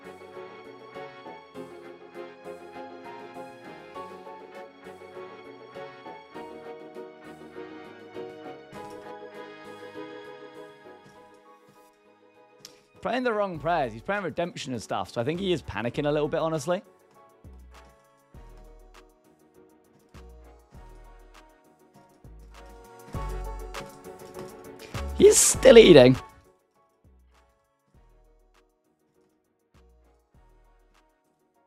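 There are no technical faults to describe in this audio.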